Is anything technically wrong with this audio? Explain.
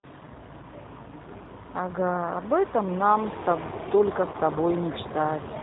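Yes. The whole clip carries G.729 codec coloring, plainly audible throughout. Every 10 ms frame is rebuilt from a vocal tract filter, a pitch predictor and a handful of fixed pulses, which fits the 8 kbit/s G.729A variant. This makes the speech rough and faintly synthetic, with a thin edge. On a spectrogram, energy stops sharply at 4 kHz with nothing above, and the harmonics look smeared.

From 4.32 to 4.36 s there is VoIP packet loss concealed by the speech codec. About 20 ms of audio went missing, which fits a single lost packet. The decoder filled the gap by repeating its last pitch and filter settings at a shrinking gain. You hear a brief stretched, distorted stretch that dips in level and then recovers. On the waveform it shows as a short run with a decaying envelope.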